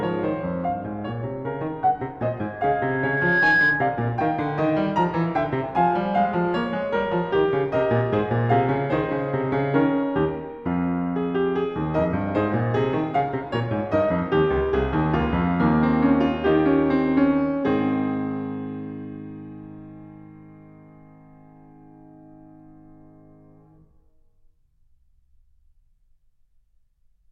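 From 2.45 to 4.13 s the music is overtaken by loudspeaker feedback squeal: a single 1.7 kHz tone swelling over roughly a second to about 5 dB above the music. That slow swell at one fixed pitch marks an acoustic loop between loudspeaker and microphone, not a steady electrical hum or whine.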